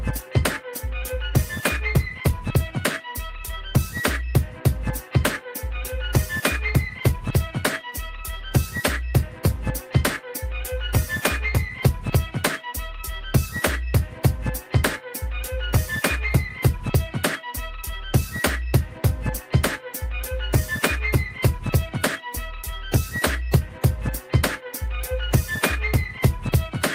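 Nothing is technically wrong with this audio.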